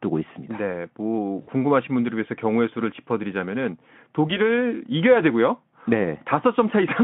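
Speech carried over a VoIP link in which packets went missing twice, and each time the speech codec concealed the loss by extending its last pitch and filter at falling gain. Near 1.41 to 1.50 s, roughly 60 ms of audio, consistent with three 20 ms frames, is replaced by a stretched buzzy tone or coloured noise that fades. At 4.27 to 4.40 s a shorter loss of about 20 ms, fitting a single frame, leaves the voice weak or distorted past the gap while the decoder recovers. The audio is confined to a narrowband telephone range, roughly 150 Hz to 3.4 kHz.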